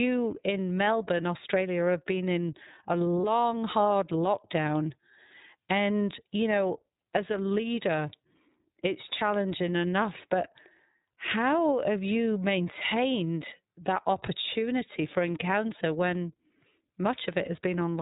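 Throughout, the speech carries plainly audible iLBC codec damage: nothing above 4 kHz, with a rough, synthetic texture from frame-by-frame excitation coding that fits the 13.33 kbps, 30 ms-frame mode. From 3.21 to 3.24 s, between "have been in a" and "hard lockdown", lost iLBC frames leave a gap that fits a single 30 ms frame; the decoder fills it with a repeated pitch cycle mixed with noise, heard as a brief held buzzy vowel before clean recovery.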